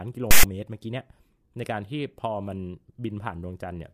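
A sudden rasp with hard edges cuts into the speech from 0.31 to 0.43 s. This is file tags played as audio: a block of text tags was read as if it were samples, so character bytes became a loud, lopsided waveform offset to one side.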